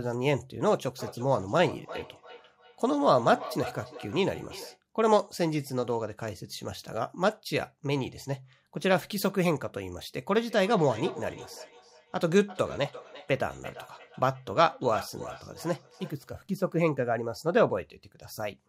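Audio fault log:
0.99–4.81 s, feedback echo between two devices: a nearby second device replays the call, this microphone recaptures it, so speech returns roughly every 300 ms, about 14 dB down.
10.42–16.35 s, feedback echo between two devices: the local canceller cannot remove the other device's playback, so speech repeats at roughly 300 ms intervals, about 16 dB below.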